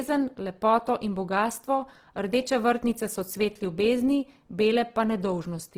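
Throughout, the speech sounds rough and grainy, its tones turned noisy though the band still reaches 20.3 kHz. This is likely Opus compression at a low bitrate, near 16 kbps.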